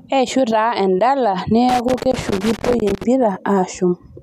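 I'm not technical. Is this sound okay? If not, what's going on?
No. Somewhere in the signal path a plug or socket has a worn or dirty contact, so the connection keeps breaking and reconnecting for an instant. That is loose connector crackle. Just after "taa endala", from about 1.69 to 3.04 seconds, the speech gets chopped into an uneven burst of crackling and scratching, a bit like a faulty headphone cable being wiggled. Once that stretch ends, the crackle stops.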